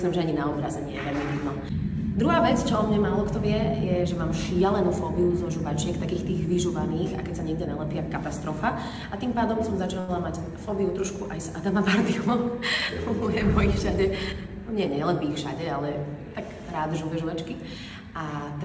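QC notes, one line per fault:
10.00–10.11 s, short stall from a late packet: A packet failed to arrive on time, and the jitter buffer ran dry. The receiver filled the gap by stretching the last stretch of sound for 82 ms, then resumed exactly where it had stopped once the packet turned up. Nothing is lost, but one sound hangs on too long with a faint buzzy or dipped quality, and everything after it runs 82 ms later than before.
14.04–14.56 s, jitter buffer speed-up: The buffer had built up more audio than its target, so the receiver trimmed it back by cutting out many short slices a pitch period or so long, one after another. Over this half-second it removed about 70 ms, which plays the audio at 110% speed with the pitch unchanged. The passage sounds rushed and clipped along, and any steady rhythm briefly pushes ahead. The G.722 call path's band limit at 8 kHz holds through both events.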